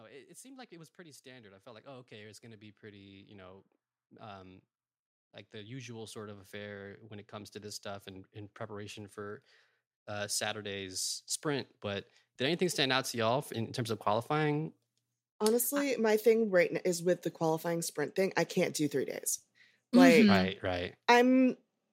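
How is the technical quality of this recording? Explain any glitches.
The recording has a recurring level problem: automatic gain rising. From 0.05 to 3.69 s, 5.51 to 9.45 s and 10.07 to 14.78 s, the speech and background swell together by about 8 to 9 dB, as the gain control judges the input too quiet and slowly turns it up.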